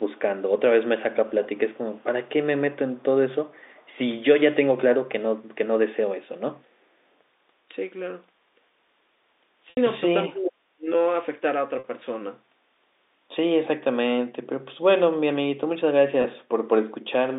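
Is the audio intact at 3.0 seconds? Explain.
No. From 2.99 to 3.03 s a very faint copy of the speech returns about 379 ms late. This is likely an echo leak from a far-end loudspeaker.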